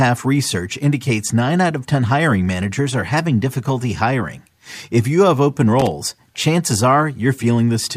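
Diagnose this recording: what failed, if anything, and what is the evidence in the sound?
The analogue wiring failed, with loose connector crackle. Just after "you have open", from 5.80 to 5.91 s, the speech breaks into a ragged burst of crackle lasting about 0.12 s. A worn or dirty contact was making and breaking, chopping the signal.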